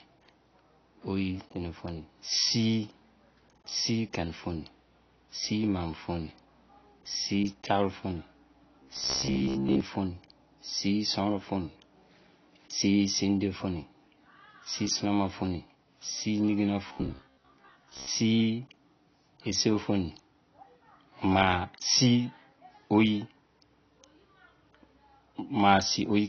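Throughout, nothing sounds above 6.6 kHz and the speech is dull, with fizzy warbling sibilants, likely AAC compression at a low bitrate near 24 kbps, smearing rather than crackling. From 8.80 to 9.81 s and 16.88 to 18.08 s, a rigid metallic buzz at 66.8 Hz comes in: robotic sound from repeated short buffers, likely about 15 ms looped while most real audio is skipped, unlike steady codec fizz.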